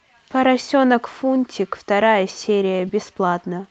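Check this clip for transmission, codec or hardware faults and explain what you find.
Two brief dropouts are audible in this speech clip, both short concealed packet loss. They fall at 1.11 to 1.15 s and 2.87 to 2.91 s. In each, about 20 ms of audio failed to arrive in time. The receiver's decoder covered the hole by extending the preceding sound and then blending back into the real signal. Each event sounds like a short smear or wobble.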